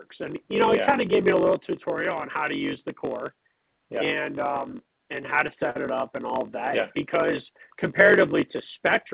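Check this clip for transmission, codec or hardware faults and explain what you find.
Two faults are audible, and they sit on top of a call path whose G.711 mu-law coding leaves nothing above 4 kHz.

A block size mismatch (padded) runs through the whole clip. One stage writes blocks a little shorter than the next stage reads. The reader fills the rest of each block with zeros. That inserts a short gap in every block. The result is a steady buzz at 46.9 Hz. The audio also runs slower, at 0.938 times normal speed, while its pitch stays about right. This fits 1024-sample reads being fed roughly 960-sample writes.

Repeated stalls (stutter) occur from 4.72 s to 5.77 s. The jitter buffer ran empty six times. Each time, the receiver stretched the last sound until new packets arrived. About 98 ms was filled this way, with the longest wait 50 ms. Nothing is lost. The concealed parts make up about 9% of that stretch. 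The sound drags and stutters briefly.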